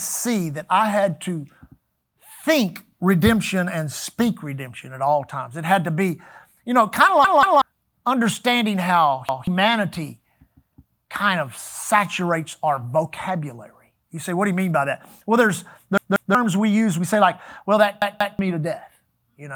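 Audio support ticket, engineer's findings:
Repeated buffer, speech stutters at 7.25–7.62 s, 9.29–9.47 s, 15.98–16.35 s, 18.02–18.39 s. Playback underrun: the device replays the last 186 ms block (fits an 8192-sample buffer) once or twice, losing roughly 0.2–0.4 s. Waveform/spectrogram shows identical tiled segments with hard vertical seams.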